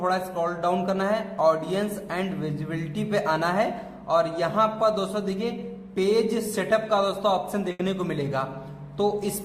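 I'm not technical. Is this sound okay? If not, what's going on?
No. There is one problem, near the end, from about 7.71 to 7.81 seconds. It is a burst of packet loss. A short run of the audio never arrived in time. To cover the gap, the player stretched out the last bit of sound it had and let it fade, for about 80 milliseconds. So you hear a brief held buzz or hiss. Then the audio jumps ahead, and about 80 milliseconds of the real sound is simply gone.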